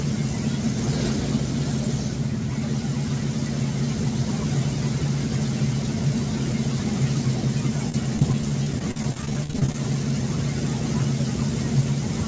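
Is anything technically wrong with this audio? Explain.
Yes. From 7.9 to 9.75 s, repeated packet loss (robotic sound): dozens of gaps up to 45 ms are filled by stretching preceding sound, producing sustained choppy stutter with pieces missing rather than one isolated dropout.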